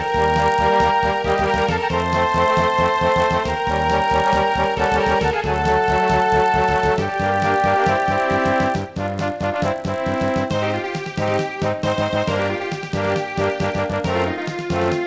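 The resampler was restarted on every block. Each 20 ms chunk was converted in isolation, in a way that fits a 48 kHz to 16 kHz conversion, so every block edge carries a small error. Throughout, this is heard as a 50 Hz buzz that is present only while sound plays.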